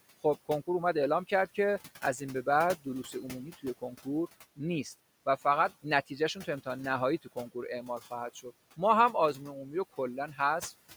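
Sample clock jitter runs from 1.21 to 4.89 s. The converter's clock wanders by around a couple of microseconds, so each sample lands slightly early or late, and the timing error turns into an amplitude error wherever the waveform moves fast. It sits roughly 35 dB below the speech as a gritty hiss that swells on loud, bright sounds and sibilants and drops away in pauses, where only the room noise about 20 dB under the speech remains.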